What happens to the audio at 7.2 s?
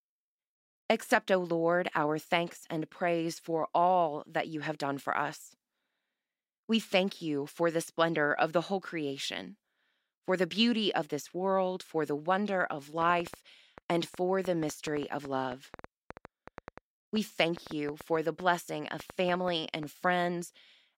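Nothing goes wrong at 7.2 s; the speech runs on there without any dropout, click, distortion or other audible fault.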